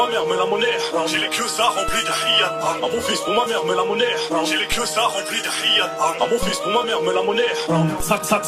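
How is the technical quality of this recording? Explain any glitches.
The recording has four DC steps, at 1.89, 4.72, 6.43 and 8.00 s. At each, the waveform's zero line jumps by about −16 dBFS and then drains away as a 5 Hz high-pass lets it decay, giving a dull low thump while the sound carries on unchanged. A plain click would be a brief spike instead.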